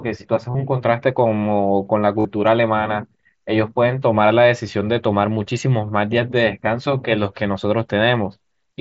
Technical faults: concealed Bluetooth headset packet loss

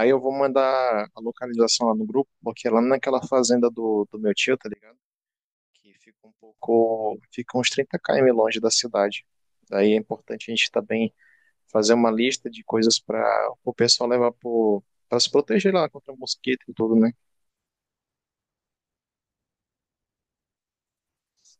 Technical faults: one channel inverted

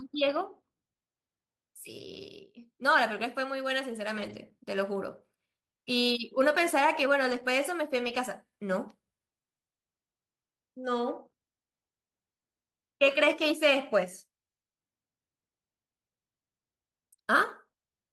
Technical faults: lost packet rebuilt from error correction

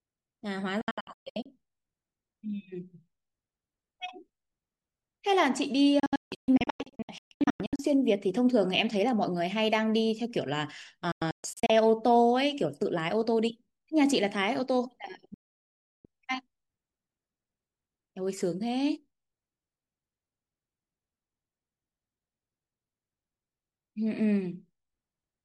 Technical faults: digital broadcast dropout

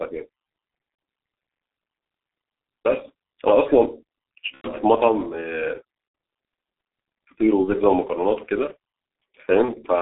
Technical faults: G.723.1 codec; VoIP packet loss concealed by the speech codec

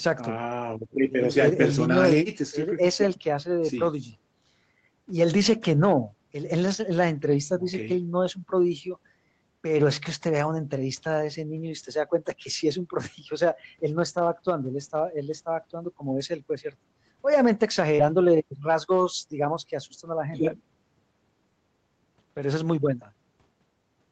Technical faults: lost packet rebuilt from error correction; short concealed packet loss

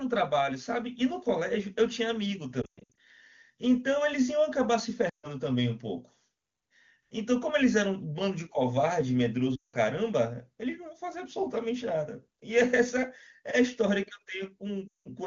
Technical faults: lost AMR speech frames

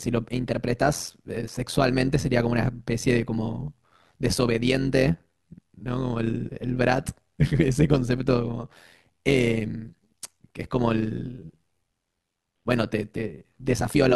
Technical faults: overlap-add ripple

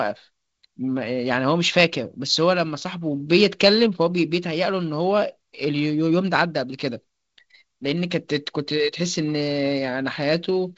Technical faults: none

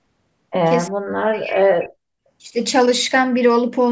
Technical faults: speech suppressed in double talk

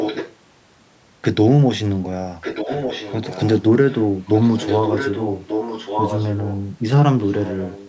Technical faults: echo leak

